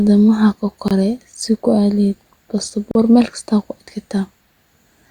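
At 0.88 to 0.91 s and 2.91 to 2.95 s, gaps at joins of encoded pieces drop out the speech for 26 and 38 ms. Untrimmed encoder padding appears as blank vertical strips with smeared edges.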